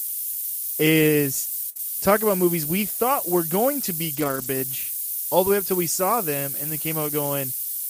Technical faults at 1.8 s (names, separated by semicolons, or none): low bit depth with noise shaping; burst of packet loss; short concealed packet loss